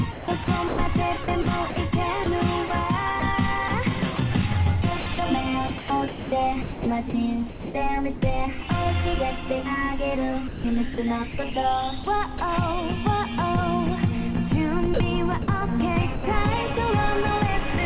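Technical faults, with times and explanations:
0.12–4.18 s, 5.0–8.22 s, 10.48–12.4 s, 14.94–15.48 s: sound chopped by the voice detector. Quiet parts flicker into synthetic background, about 540, 1060, 320 and 120 ms in total, likely from the sender's detector gating transmission repeatedly.
16.16–16.24 s: sound dropped by the voice detector. The sound gives way to steady comfort noise for 80 ms, likely because the detector mistook quiet sound for background.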